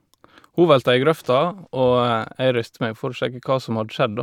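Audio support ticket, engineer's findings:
Listened through the speech clip and nothing turned up, so no faults to log on this ticket.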